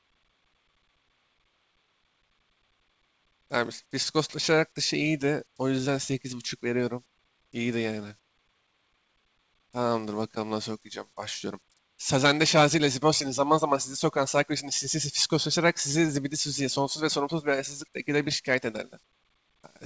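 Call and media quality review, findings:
No faults found in the speech; content stops at 8 kHz, which fits a G.722 wideband call path operating normally.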